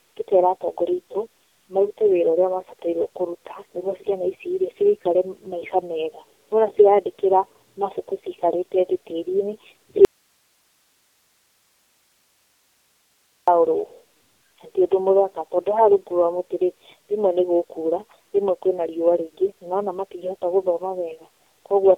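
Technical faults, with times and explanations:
Throughout: tandem speech coding. The speech passed through three low-rate speech codecs in a row, G.723.1 twice and AMR-NB, with A-law links between them. Each re-coding stacks further damage, leaving rough, muffled, warbly speech. A spectrogram shows nothing above 3.7 kHz and smeared formants.
10.05 to 13.48 s: audio dropout to a faint residue. The speech vanishes abruptly for 3.43 s, leaving only hiss about 45 dB below the signal. It was likely a lost feed while the downstream path stayed live. The waveform shows a sharp drop to a thin noise band.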